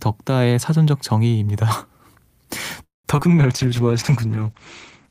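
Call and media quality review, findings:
Call audio freeze, 2.83 to 3.06 s: speech halts and a 210 ms gap is inserted, about 150 ms of it silent after the last sound trails off. Nothing lost; resumes where it stopped. Likely late packets draining the jitter buffer.

Skip ahead, 3.16 to 3.20 s: playback jumps forward, cutting out roughly 70 ms of speech with only a very brief fill at the join. Stretch dropped in transit or by an overflowing jitter buffer while later audio waited.

Jitter buffer slow-down, 3.28 to 3.71 s: speech drawn out to 90% speed at unchanged pitch, 48 ms added. Receiver repeating single pitch periods to rebuild its reserve.

Call bitrate drop, 3.39 s to end: Opus falls from 48 to 11 kbps, holding the lowest rate for about 1.1 s. Bandwidth cut from 20 kHz to 8 kHz; speech turns muffled and rough from a falling bandwidth estimate.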